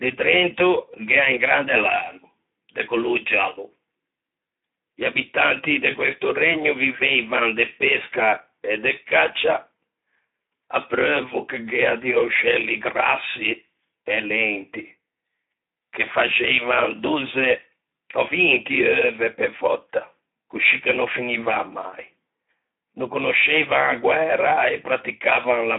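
Throughout, the speech carries plainly audible Speex codec damage. With too few bits to code the excitation, voiced sounds come out hoarse and noisy, which fits a setting near 11 kbps. The band is held between 200 Hz and 3.7 kHz.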